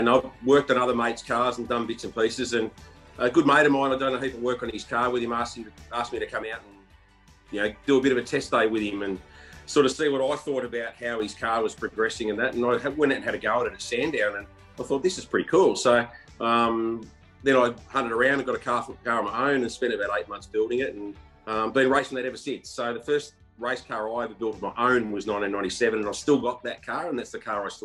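At 6.43–7.48 s, 9.92–11.20 s, 21.99–24.39 s and 26.44 s to the end, the level drops abruptly by about 6 dB, likely one channel dropping out. Unlike a gain dip, the edges are instant and the fixed 6 dB step matches losing half the mono sum.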